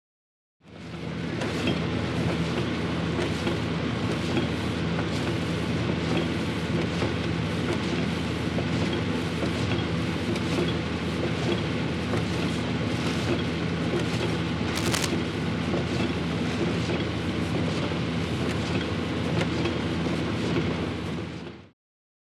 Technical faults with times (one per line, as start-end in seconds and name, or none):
14.75-15.07 cable scratch noise